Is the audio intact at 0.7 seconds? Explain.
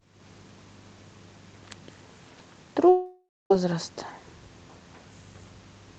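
Yes, the speech at 0.7 seconds is intact, with no dropout, click or distortion at that point.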